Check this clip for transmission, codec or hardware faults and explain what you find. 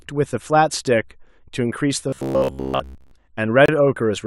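Two faults are audible in this speech clip.

From 2.09 to 3.13 s there is robotic sound from repeated short buffers: a rigid metallic buzz at 66.8 Hz that still loosely tracks the speech. The likely cause is late-arriving audio, with each roughly 15 ms buffer replayed in place of most of the real signal. Unlike a dropout, the sound never stops; it loops.

At 3.66 to 3.69 s a gap between stream segments cuts in: 26.2 ms of hard-edged silence where segment timestamps fail to meet, fitting a boundary between 2-second segments. Unlike a packet loss, nothing is missing; the silence is inserted and the sound resumes intact.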